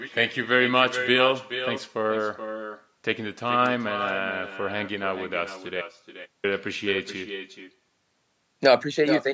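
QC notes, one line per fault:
Throughout, echo with no canceller: every phrase of the speech is followed by a fainter, thinner copy, about 10 dB down, arriving after roughly four tenths of a second. The far end is playing the call through a loudspeaker and its microphone is sending it straight back, with nothing cancelling it. On a spectrogram each burst of energy has a weaker twin trailing it at a fixed offset. On the waveform, syllable envelopes show matching lower bumps just behind them.
5.82 to 6.44 s, audio dropout to silence: the speech stops dead mid-flow and returns 0.62 s later. The gap holds silence with no room tone, so whatever was said in that stretch is lost. The likely cause is that the input was cut off for a moment, by a disconnect, a link failure or a brief mute, while recording carried on writing silence. The waveform goes to a flat line with abrupt edges on both sides. 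The spectrogram shows a dark vertical band, and the echo drops out along with the speech.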